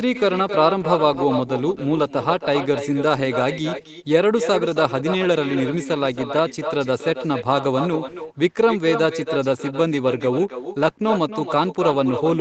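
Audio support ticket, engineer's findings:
Echo with no canceller, throughout. Every phrase is shadowed by a thinner copy about 8 dB down, arriving around a third of a second later. Probable component: the far end's loudspeaker-to-microphone path, with no echo cancellation before the return leg. On the waveform, each burst has a smaller delayed twin. On the spectrogram, every syllable's pattern repeats faintly to its right, inside a band that stops at 8 kHz, as expected for the Opus call path.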